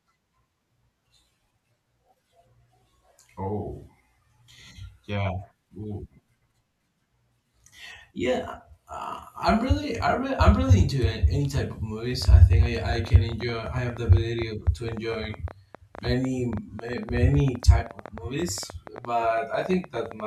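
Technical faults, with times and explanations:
12.22 to 20.21 s, train of clicks: roughly a hundred similar pulses arrive at about 10.7 per second with uneven spacing, peaking around 5 dB above the speech and ticking through pauses too. The repeated, much-the-same shape separates it from random crackle, likely interference or a faulty connection or power supply.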